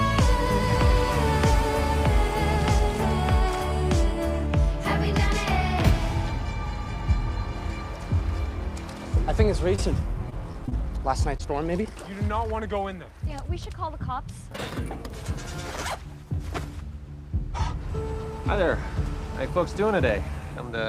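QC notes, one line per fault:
9.75–9.80 s, 11.37–11.41 s and 11.83–11.87 s, short concealed packet loss: each is a brief smear or wobble where a sliver of sound blurs. About 20 ms failed to arrive in time each time, fitting one lost packet, and the receiver extended the preceding sound before blending back.
10.30–10.73 s, repeated packet loss (robotic sound): choppy stutter with fragments dropping out. Four separate holes, the longest 21 ms and about 80 ms in total, were each patched by continuing the previous sound, so roughly a fifth of this stretch is synthetic fill.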